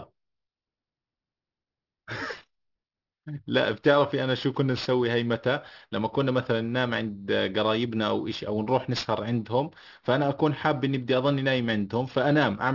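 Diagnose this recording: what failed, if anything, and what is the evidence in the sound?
Sibilants throughout the recording sound gritty and metallic, with hiss-like energy landing at unrelated pitches, and the spectrum runs hard up to a ceiling at 6 kHz. That is aliasing from a sample-format conversion stage. The fold point fits a downsample from 44.1 kHz to 12 kHz done without an anti-alias filter, so content above 6 kHz mirrored back below it, sitting roughly 20 dB under the speech.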